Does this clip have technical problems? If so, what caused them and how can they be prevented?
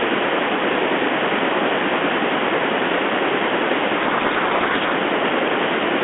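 Yes. From 4.0 to 4.93 s the speech falls apart into harsh, grinding distortion. That's a codec payload misread on the G.726 link: the two ends disagree on the bit order of each code word. The decoder pulls plausible-looking values from the wrong bit positions and rebuilds a badly wrong waveform, burying the speech in rasp until both sides agree again. Configuring both ends for the same G.726 packing order prevents it.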